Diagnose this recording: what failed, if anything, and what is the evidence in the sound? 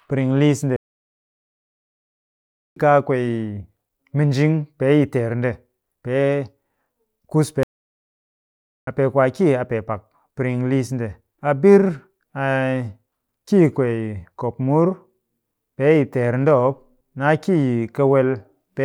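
Playback stage: the speech halts for 2 s at 0.76 s and for 1.24 s at 7.63 s, then resumes. A playback stall, likely from buffer underrun.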